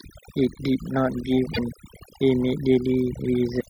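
A speech recording with two faults. Overdone noise removal was applied across the whole clip: the noise reduction was set so strong that it pulls individual frequency bands down or out wherever they sit near its noise estimate, taking the quieter parts of the voice with them. The background drops and breaks up into twinkling specks. There is also damaged data in the compressed stream at about 1.50 to 1.59 s and again at 3.57 to 3.66 s. Corrupted bytes there cause the decoder to misread frames and lose sync while it searches for the next valid header.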